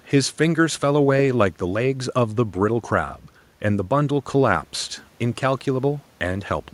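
No technical faults can be heard anywhere in the speech.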